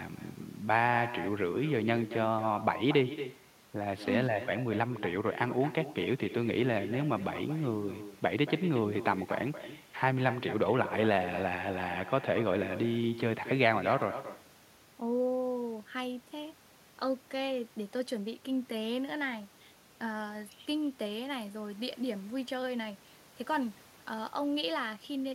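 Echo with no canceller, throughout: the far-end loudspeaker leaks into its microphone, so speech returns about a fifth of a second later, about 13 dB quieter and thinner.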